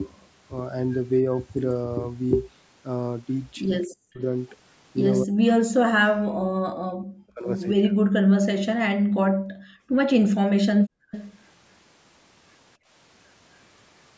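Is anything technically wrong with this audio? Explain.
Yes, there are three kinds of problem.

Speech suppressed in double talk hits 3.85–4.21 s, 5.23–6.47 s, 6.84–7.49 s and 7.73–8.06 s. The voice sinks by around 40 dB, likely because the echo canceller mistook overlapping talk for echo.

Background gated by the echo canceller shows up at 8.97–9.97 s and 10.79–11.11 s, where the room sound drops about 40 dB. It happens again at 12.77–12.89 s, dropping about 24 dB. The canceller clamps the mic while the loudspeaker plays.

An echo leak follows at 11.11–11.32 s. It's a copy of the voice delayed 260 ms and sitting roughly 15 dB down, likely residue the far-end canceller didn't remove.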